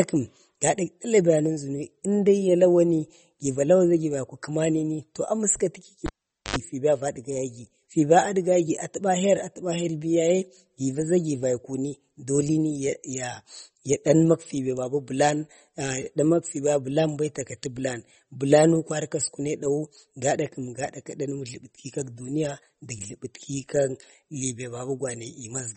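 From the start, the speech sounds watery and swirly, with metallic chirps on s sounds and smeared attacks. Nothing is heard above 8.4 kHz. The likely cause is heavy MP3 compression, which fits a bitrate around 32 kbps. Starved of bits, the encoder drops the treble and switches weak frequency lines on and off.

At 6.06 s a cable is pulled and plugged in. A pop opens a gap of about 0.45 s. Then 78 ms of 50 Hz mains buzz comes through as the tip touches. A second pop at 6.56 s brings the sound back.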